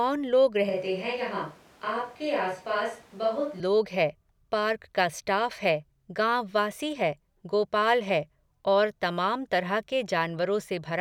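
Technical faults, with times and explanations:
0.70 to 3.60 s, switch to a distant microphone: the speech abruptly turns roomy and hollow, with thinner low end, drops by about 5 dB, and picks up background noise sitting only about 25 dB below the speech. This is likely because the close microphone's signal dropped out and the recording fell back on one placed further away, which hears more room reflection and ambient noise than direct sound. The close, full tone returns just as suddenly at 3.60 s.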